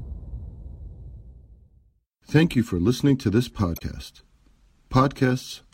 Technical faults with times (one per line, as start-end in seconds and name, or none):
3.75-3.82 damaged data in a compressed stream